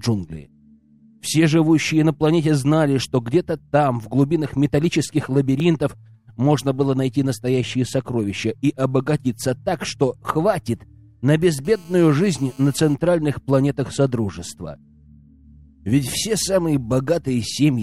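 At 11.65 s a GSM phone buzz cuts in and holds until about 12.94 s. It's that hard, raspy drone sitting at roughly 217 Hz with a stack of harmonics above it, and it has nothing to do with the audio underneath. A 2G handset nearby was transmitting in bursts at that rate, and the audio circuitry rectified the radio pulses into sound. It stays steady throughout, the way it does during a call, and sits about 30 dB below the signal.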